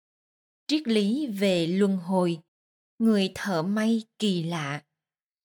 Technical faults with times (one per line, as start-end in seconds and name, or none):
none